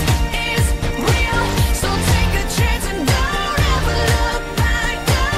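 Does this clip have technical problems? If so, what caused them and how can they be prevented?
No, no technical faults here.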